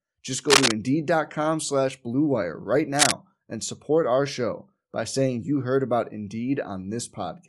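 Bluetooth LC3 compression shapes the speech throughout: the upper spectrum sounds thinned and replaced by a grainy, breathy wash, with plainly audible codec damage. This is likely an LC3 stream, where each short 7.5 ms frame is coded in the frequency domain, high bands that lack the bits are zeroed and filled with noise, and the texture fits a bitrate near 48 kbps.

Cable scratch noise appears from 0.49 to 0.73 s and again from 2.95 to 3.12 s, just before "and support our show". Each is a dense, uneven burst of rustling that sits somewhat louder than the speech. Such bursts are likely caused by a worn cable or connector being moved, so that its contact resistance jumps rapidly and injects noise into the signal.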